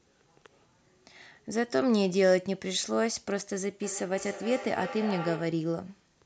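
From 3.81 s to 5.70 s there is feedback echo between two devices. The speech returns at a steady interval of roughly 0.3 s. Two devices in the same room are joined to one call. One plays back what the other's microphone sent, and that microphone picks it up again. Neither echo canceller removes sound played by the other device. At their loudest, the repeats sit about 11 dB below the speech.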